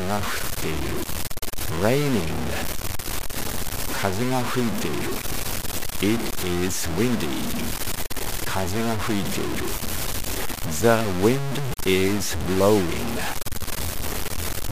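Low bit depth without dither runs through the whole clip, likely from samples truncated to around 4 bits with no dither added. The rounding error tracks the sound, sitting nearly as loud as the signal itself, so everything turns coarse and grainy, and quiet stretches sputter or drop out.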